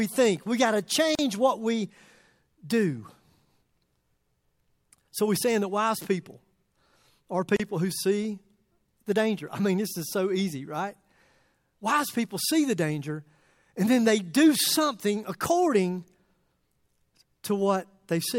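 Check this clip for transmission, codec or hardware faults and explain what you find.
Two short dropouts in the speech, both the same thing. At 1.15 s and 7.56 s there's a gap at a join of encoded pieces. Separately encoded segments were butted together untrimmed, so encoder delay and end padding leave roughly 37 ms and 32 ms of silence, smeared at the edges, before the speech carries on.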